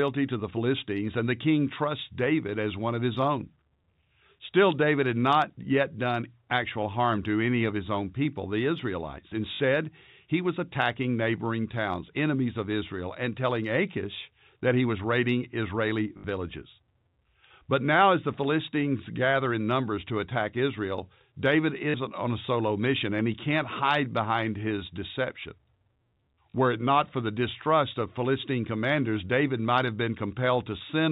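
A speech clip with packet loss with the last packet repeated, at 9.54, 16.18, 21.9 (just before "on a solo mission") and 26.5 s. Each gap lasts 60 or 40 ms. The receiver replays one chunk, causing a brief 50 Hz robotic stutter, which fits 20 ms packets. It runs over telephone-band G.711 coding.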